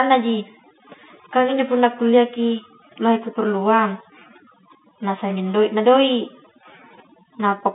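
Throughout, overdone noise removal switches off bands near its noise estimate, leaving twinkling specks in near silence; the spectrogram shows scattered isolated dots, all within a telephone band ending near 3.8 kHz.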